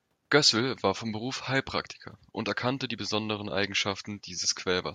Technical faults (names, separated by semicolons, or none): none